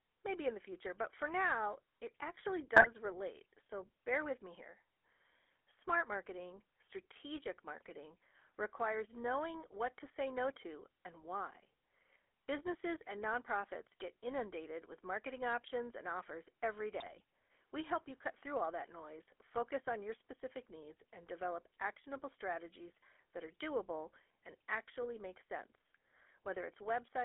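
Right from the start, the whole clip has that GSM full-rate codec grit. The voice is rebuilt from a vocal-tract model driven by coarse pulses, so it comes out buzzy and gravelly, and nothing gets through outside about 300 Hz to 3.4 kHz, which fits a 13 kbps full-rate coder.

At 2.76 to 2.88 s, between "for now it actually" and "relate so bear with", come GSM bit errors. Corrupted filter, pitch and gain values warp a handful of frames into a brief squawk and pop. At 17.0 to 17.22 s, after "options and offers every", a longer run of damaged frames turns into gargling.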